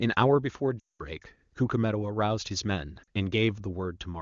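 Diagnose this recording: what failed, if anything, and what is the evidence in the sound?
Radio errors dropped AMR speech frames: 0.79–1.02 s drops to near silence within two frames (about 200 ms, fitting ten 20 ms frames); 3.03–3.08 s briefly dips.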